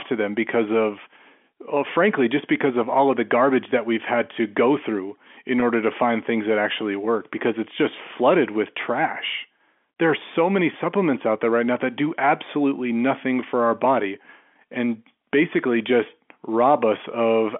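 At 5.60 to 5.62 s, between "to go through in" and "order to find things", a packet loss with pitch repetition occurs. 20 ms of speech went missing. The receiver repeated the last pitch period to fill it. It sounds like a slightly held buzz.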